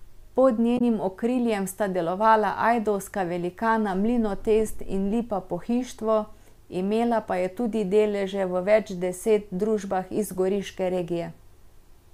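At 0.75 s, just before "okriljem sta delovala ajdovska", damaged data in the compressed stream gives a short glitch lasting about 70 ms. Some frame bytes were lost or corrupted. The decoder misread them, lost sync, and recovered at a later frame header.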